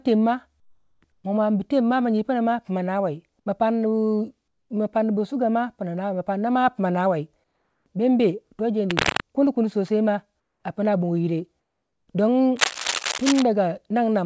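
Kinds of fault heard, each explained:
Comfort noise in place of the background: at 0.60 to 1.02 s, 7.44 to 7.86 s and 10.40 to 10.64 s, the faint room background, some 50 dB below the loudest speech, gives way to a flat, textureless hiss that sits about 7, 4 and 8 dB lower. The likely cause is discontinuous transmission: the sender went quiet in these pauses, and the receiver filled each gap with generated noise that only roughly matches the real background.
Cable scratch noise: from 8.90 to 9.21 s and again from 12.56 to 13.42 s, a dense, irregular scratching and rustling rides over the audio at roughly the same loudness as the speech itself. This is most likely a worn cable, connector or control being moved, with its contact resistance fluctuating rapidly and injecting bursts of noise into the signal for as long as the movement lasts.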